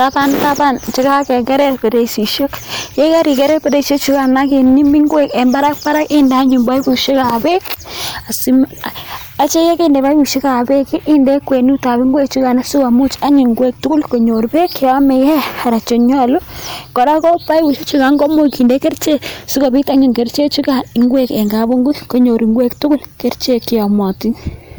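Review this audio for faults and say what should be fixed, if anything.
Hard clipping runs throughout: the speech overdrives a stage by about 4 dB, so roughly 2 percent of samples are flattened, giving crackle on peaks. Lower the gain before conversion to leave headroom.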